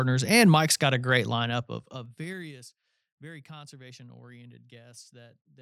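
Right after "got a great", from 1.46 to 2.58 s, the speech gets pulled down by about 25 dB, and it doesn't glide down. It drops in 2 dB jumps, around ten of them a second, with no smoothing between them. Each jump puts a little click into the waveform, so you get that classic zipper noise: a ticking, zipping texture riding on the speech for as long as the fade is moving.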